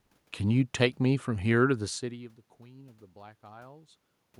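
Nothing in the speech stood out as a technical fault on listening; the room noise and the change in level around 2 s, as the talker shifts position relative to the microphone, are part of the recording itself.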